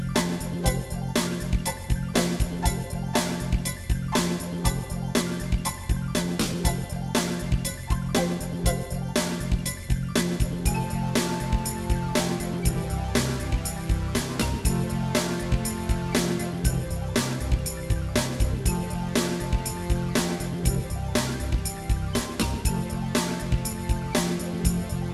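Nothing in the audio stands out as a technical fault, so there's nothing to flag at any point along the way.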